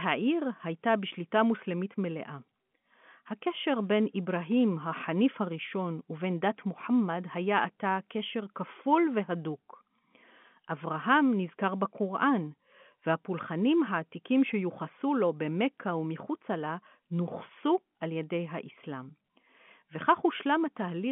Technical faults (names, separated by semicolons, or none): none